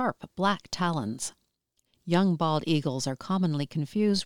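Nothing in the speech stood out as a technical fault on listening.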